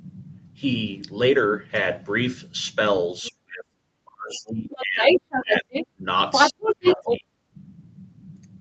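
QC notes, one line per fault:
3.22–5.22 s, 5.41–5.74 s, 5.90–6.04 s, 6.51–7.56 s, speech suppressed in double talk: the talker's own level ducks by up to about 35 dB in patches, likely because the canceller attenuated everything during overlap. This is a loss of the talker rather than an added voice.
3.24–3.29 s, 4.71–5.87 s, 6.32–7.20 s, other side's voice leaking through: a second voice enters, first as a faint scrap about 20 dB down, then about 5 dB above the talker. This is likely residual loudspeaker echo, which adds a voice instead of removing one.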